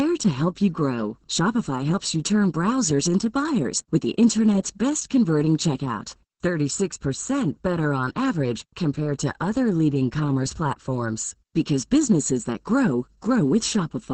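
From start to finish the speech is affected by channel delay (comb filtering). One channel trails the other by about 0.7 ms, and summing them to mono cancels energy at evenly spaced frequencies, with the first notch around 700 Hz. The result sounds hollow and phasey.

Throughout, the speech also shows heavy Opus voice compression damage. The coarse, muffled, slightly hoarse and robotic texture of the SILK coder in wideband mode with 20 ms frames points to a bitrate around 10 kbps, where the excitation is coded too sparsely to stay natural.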